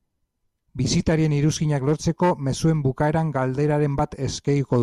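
Listening to the speech recording, nothing stood out as a technical fault at any point.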